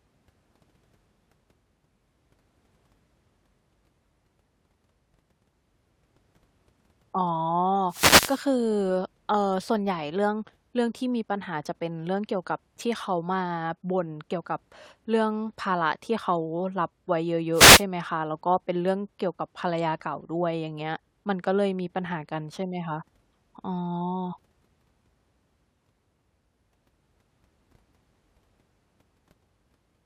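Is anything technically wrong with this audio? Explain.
Yes. Wireless microphone noise hits occur at 7.80–8.51 s and 17.51–17.84 s: as the radio signal fades, receiver hiss surges over the speech, showing as broadband vertical smears and ragged waveform bursts.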